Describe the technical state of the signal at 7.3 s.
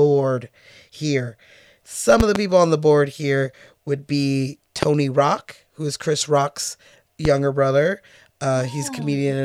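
A single sharp pop cuts across the speech from 7.25 to 7.28 s, jumping to roughly 15 dB above the surrounding level for an instant while the speech continues underneath without a break. This loud pop is likely the result of a sudden voltage step or spike, from a switch, a connector, static discharge or a driver glitch, entering the signal path and being shaped by the circuitry after it into a brief, hard transient.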